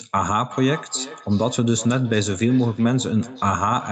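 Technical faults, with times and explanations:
0.5 s to the end: feedback echo between two devices. The speech keeps coming back roughly every 400 ms, peaking at about 16 dB under the direct sound. A second device on the call is replaying this audio into the mic, and the local echo canceller can't remove sound it didn't play.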